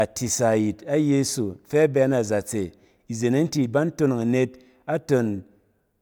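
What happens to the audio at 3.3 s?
Nothing goes wrong at 3.3 s; the speech there plays through intact, with no dropout, click or distortion.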